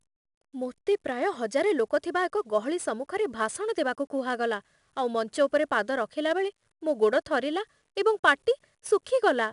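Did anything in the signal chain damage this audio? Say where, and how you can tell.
Yes. 4-bit ADPCM compression at the codec stage damages the speech throughout. A gritty hiss tracks the level of every loud passage, with roughness on sharp onsets where the adaptive step lags. Nothing sounds above 10.6 kHz, which fits a reduced sample rate, with the stream near 89 kbps.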